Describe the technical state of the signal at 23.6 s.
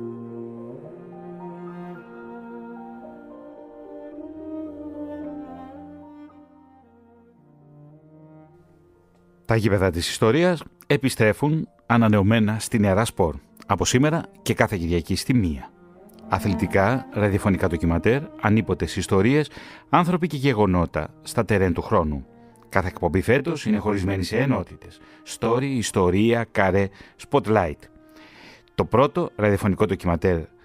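At 23.6 s the signal shows channel delay (comb filtering), running from 23.39 to 25.59 s. One channel lags the other by roughly 20 ms, and when the two are summed to mono, shared content cancels at evenly spaced frequencies, starting down near 20 Hz. The result sounds rough or slightly doubled. On a spectrogram this appears as a comb of regularly spaced horizontal dark notch bands; the waveform shows doubled, smeared transients.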